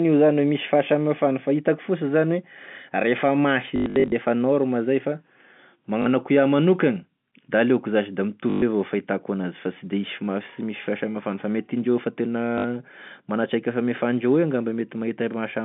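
At 3.76 to 4.12 s, just before "norma zay", there's packet loss with the last packet repeated: gaps get filled by replaying audio, so you hear a robotic stutter with a 50 Hz buzz that fits 20 ms packets. Shorter repeats follow at 6.02, 8.5 and 12.58 s, all over the narrow G.711 telephone band.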